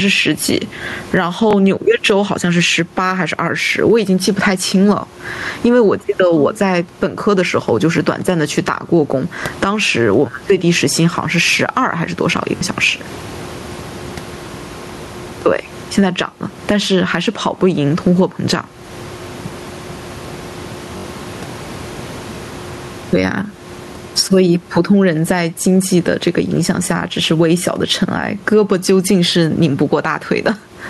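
A speech recording whose level breathes throughout. The room background sits about 32 dB below the talker, and the level swings by around 15 dB, flattening the dynamics. This gain pumping is likely a fast limiter or compressor clamping down on input gain set far too high. Bluetooth stutter also appears as brief repeats at 1.51 to 1.53 s (21 ms), 12.57 to 12.61 s (43 ms) and 20.98 to 21.04 s (64 ms). The speech jumps forward after each one, consistent with one, two and three lost packets being covered by replaying the last buffer.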